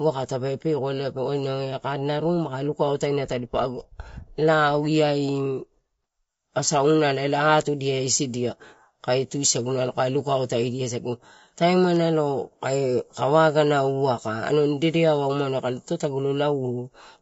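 It's a speech recording with low-delay AAC compression damage running the whole way through: the voice sounds rough and grainy, with noise filling the gaps between harmonics and a thin, synthetic top end, likely from AAC-ELD at a low rate, around 32 kbps.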